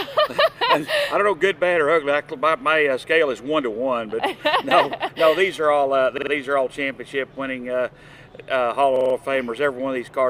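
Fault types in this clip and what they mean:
repeated buffer: at 6.18 to 6.32 s and 8.96 to 9.15 s, new audio arrived late, so the device replayed its last 46 ms block, which fits a 2048-sample buffer. Each is a short stutter with hard joins, and essentially nothing is skipped afterwards.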